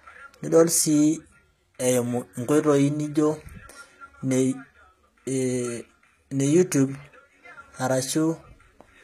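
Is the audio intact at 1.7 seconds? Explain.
No. Likely HE-AAC compression throughout rebuilds the treble from copied lower bands, so sibilants turn gritty and lispy, with nothing above 14.9 kHz.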